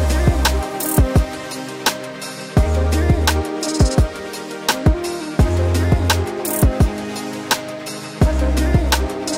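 Nothing stood out as a technical problem on listening to the audio.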